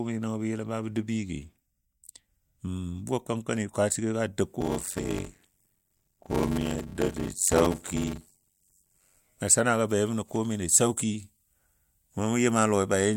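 From 4.6 to 9.17 s, a block size mismatch (padded) appears. One stage writes shorter blocks than the next reads, which fits 512-sample reads, and zeros fill each gap. A buzz near 94 Hz results. The speech slows to 0.625 speed, with its timbre intact.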